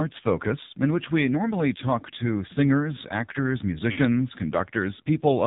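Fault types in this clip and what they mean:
AMR narrowband mobile codec: Present throughout, this mobile speech codec samples at 8 kHz, so nothing above 4 kHz survives and the speech sounds boxed-in and telephone-like. It rebuilds each 20 ms frame from a vocal tract model excited by a handful of pulses, and the damage here is heavy. The voice comes out buzzy and synthetic, which fits one of the lowest AMR-NB modes, around 5.9 kbps, where too few bits remain to describe the excitation.
Lost AMR speech frames: From 3.92 to 4.01 s, just after "talk to singers actors", frames failed their checksum and the decoder filled the gap by repeating the last good pitch and vocal tract settings at falling gain. The sound smears and briefly warbles as it fades, then returns weak and rough for a moment. The gap, about 60 ms of missing audio, fits three consecutive 20 ms frames being dropped.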